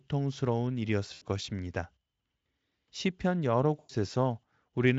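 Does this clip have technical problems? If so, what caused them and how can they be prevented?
Yes. VoIP packet loss concealed by the speech codec occurs twice, from 1.13 to 1.22 s (about 80 ms missing, which fits four 20 ms frames) and from 3.79 to 3.91 s (about 100 ms, five frames). The decoder repeated its last pitch and filter and lowered the gain, so the sound is stretched into a buzzy tone or coloured noise that fades, then stays weak briefly after packets resume. On a spectrogram, harmonics flatten into steady stripes that dim; the waveform shows repeated periods shrinking in amplitude. The Speex coding itself, apparently at a fairly high setting, adds little audible damage. Using a jitter buffer with forward error correction or redundant packets, on a less congested network, would prevent these gaps.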